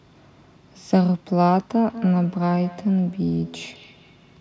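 Feedback echo between two devices starts at 1.88 s and runs to the end: a second device on the call replays this speech into the microphone, so each word returns roughly every fifth of a second, about 18 dB below the speech, thin and ringing.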